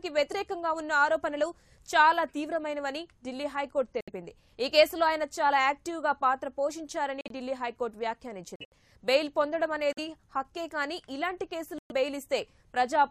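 Corrupt frame muted gaps start abruptly at 4.01, 7.21, 8.56, 9.92 and 11.78 s, lasting 0.09, 0.11, 0.17, 0.07 and 0.14 s. Damaged compressed frames were rejected by the decoder and replaced with silence. The lengths fit runs of frames roughly 25 ms long, and timing stays intact.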